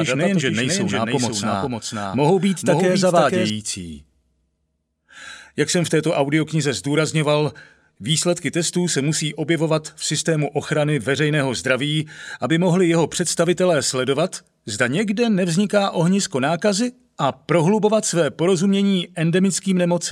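Right from the top, and already running when the clip opens, there's a doubled audio track: a second, full-band copy of the sound trailing roughly half a second behind and only a few dB quieter. It's dry, with no decay or room colour, so it reads as a distinct delayed repeat rather than an echo. It likely comes from a second capture via a slower path, or an edit holding two copies out of step. At 3.5 s it cuts off abruptly.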